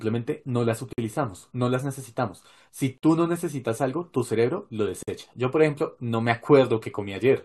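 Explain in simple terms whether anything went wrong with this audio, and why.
Yes, something went wrong: the speech was encoded in separate pieces and joined without trimming the silent padding each piece carries. This leaves a gap at a join of encoded pieces, a brief dropout of about 50 ms at 0.93, 2.98 and 5.03 seconds, repeating every 2 seconds, after which the speech picks up exactly where it stopped.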